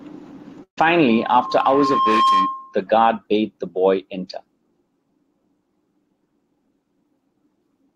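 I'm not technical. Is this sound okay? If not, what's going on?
No. From 0.63 to 0.79 s the speech briefly smears into a held sound that fades out, then picks up a little further on. That is a burst of packet loss: a chunk of the sound got lost on its way, about a seventh of a second, and the receiver stretched out the last bit to cover the gap.

From 1.09 to 2.82 s a steady high whistle, around 1.1 kHz, swells up over about a second until it's louder than the speech. That is a loudspeaker feedback squeal: a microphone picked up its own loudspeaker, and that one pitch kept looping and growing.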